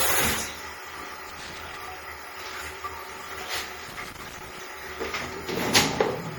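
Right from the start, the whole recording has a swirly, hollow smear, with attacks going soft and watery. That's most likely generation loss: the sound points to around five passes through an MP3 encoder at roughly 64 kbit/s, with each re-encode adding fresh quantisation noise and spectral holes. Then, from 1.29 to 1.76 s and again from 3.88 to 4.59 s, there are irregular bursts of scratchy crackle. That's loose connector crackle: a worn or dirty contact flickering open and shut as it moves, chopping the signal.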